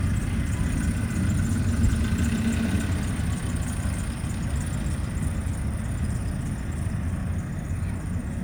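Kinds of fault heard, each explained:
Sample clock jitter: throughout, the converter clock wobbles by around 7 µs, mistiming samples and adding hiss about 30 dB down, strongest on loud, bright sounds.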